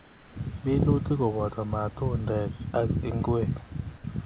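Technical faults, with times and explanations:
throughout, mains buzz: A steady, raspy buzz sits under the whole recording at roughly 30 dB below the speech. It is built on 60 Hz, and its rasp comes from a dense stack of harmonics of that frequency. A dimmer, a rectifier or an unshielded lead can inject sharp switching spikes twice per mains cycle, producing harmonics of this kind. Here those harmonics extend up to the 4 kHz ceiling of the narrowband call path.
0.00 to 0.36 s, comfort noise in place of the background: For the first 0.36 s, before the speech begins, the room background is replaced by a flat, featureless hiss about 3 dB quieter than the real background. The real background sits about 26 dB below the loud parts. The likely cause is discontinuous transmission, where the sender stops sending audio while no speech is detected and the receiver fills the gap with synthetic noise loosely matched to the background's spectrum.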